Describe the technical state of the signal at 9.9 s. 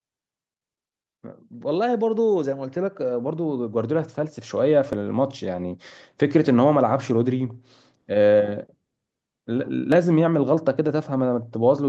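At 9.92 s there is a tiny skip, audio missing between chunks, with a few milliseconds of sound gone, likely lost as one processing chunk closed and the next opened about 5 s apart. Unlike a dropout, no silence appears; the two sides butt together.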